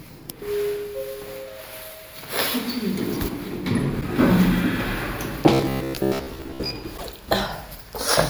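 At 4.00 to 4.03 s a corrupt frame is decoded: a single damaged compressed frame was played as if valid, so misread data puts energy at the wrong frequencies. It comes through as a brief blip peaking at about −15 dBFS.

From 5.53 to 6.73 s the sound takes on a rigid, metallic buzz at 66.7 Hz. This is robotic sound likely caused by repeated short buffers. Audio arrived too seldom, so a chunk of roughly 15 ms was looped, replacing most of the real material. The loop period fixes the buzz pitch.

At 6.97 to 7.08 s another corrupt frame burst hits a few consecutive frames, producing a short squeaky noise burst peaking at about −20 dBFS.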